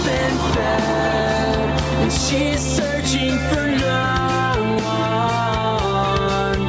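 From start to finish there's gain pumping going on. The level ducks by roughly 5 dB as soon as something loud comes in, so loud and quiet parts sit squashed close together in level. The likely cause is input gain set far too hot for the microphone, with a fast limiter or compressor clamping down on each loud sound. The call's microphone processing, which stops at 8 kHz, doesn't hide it.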